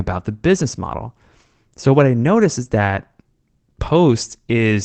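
No technical faults occur at any point in this recording.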